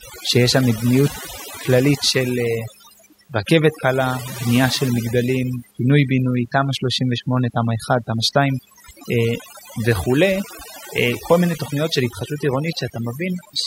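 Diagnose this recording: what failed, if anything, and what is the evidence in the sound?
The call processing stage is the culprit: overdone noise removal runs through the whole speech clip. Between phrases the background drops to near silence with little twinkling specks, because the suppressor is pulling down any band close to its noise estimate, quieter voice detail included.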